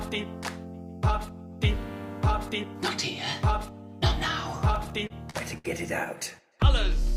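From 4.75 to 5.67 s, repeated stalls (stutter) occur. Late packets keep emptying the jitter buffer. Six brief held-over fills, longest 65 ms, make the sound drag and hiccup.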